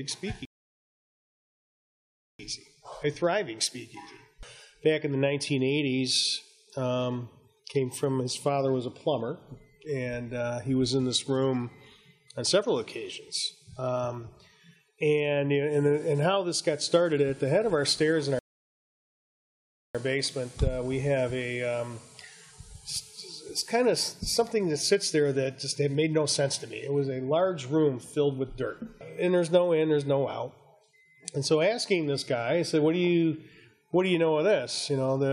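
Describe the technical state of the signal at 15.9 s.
At 15.9 s the signal is intact, with no audible technical fault at that moment.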